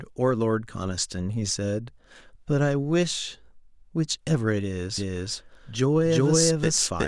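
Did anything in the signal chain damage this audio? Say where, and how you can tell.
Yes. From 4.98 s to the end, a doubled audio track appears: a full-band copy about as loud as the original trails it by roughly 0.4 s, with no decay or room colour. It most likely comes from a slower second capture path or a misaligned edit. A spectrogram shows every pattern repeated at that fixed offset, starting abruptly.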